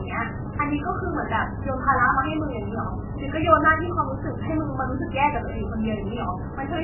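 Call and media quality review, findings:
Watery, swirling speech throughout, start to end; dull top, nothing above 3 kHz; smeared consonant onsets. Likely MP3 compression, heavy, pointing to roughly 8 kbps: fixed treble cut, weak frequency lines toggling frame to frame.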